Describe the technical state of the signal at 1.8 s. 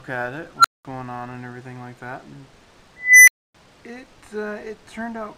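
At 1.8 s the signal is intact, with no audible dropout, clipping, glitch or other fault.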